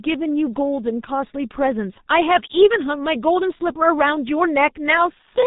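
From start to finish, the speech has passed through a G.723.1 codec, a narrowband telephony coder whose heavy damage fits a rate near 6.3 kbit/s. Nothing survives above 3.8 kHz, so the speech sounds muffled and hoarse, with consonants smeared together.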